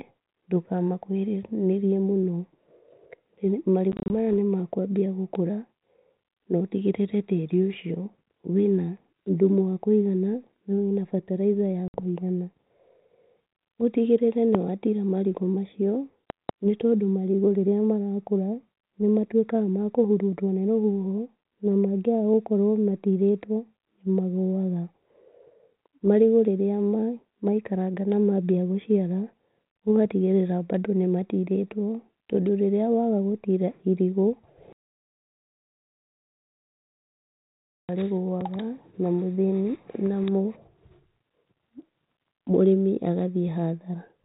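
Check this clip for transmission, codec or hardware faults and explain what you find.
Two kinds of fault are present: packet loss on the ADPCM call, and loud pops.

Packet loss on an ADPCM call occurs at 3.92–4.33 s, where about 100 ms of audio drops out in gaps up to 30 ms long, and at 11.88–12.00 s, where about 60 ms is lost. The gaps are filled with silence, and the decoder's predictor and step size lose track of the sender's, so the speech returns slightly distorted before settling. The losses are consistent with roughly ten and seven packets.

A loud pop occurs at 14.55–14.57 s, followed by a double pop at 16.30–16.51 s, each about 15 dB above the speech. They sound like sharp transients over the continuing speech, likely from voltage spikes from a connector, switch or static discharge. The 32 kbit/s G.726 link carries the speech band-limited below 4 kHz.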